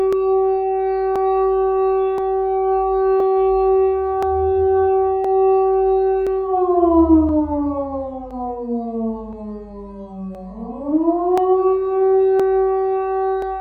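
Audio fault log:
0.13 to 13.42 s, periodic USB or driver dropouts: about half a millisecond skipped every 1.02 s, splicing the waveform into regular ticks, seen as thin vertical broadband spectrogram lines.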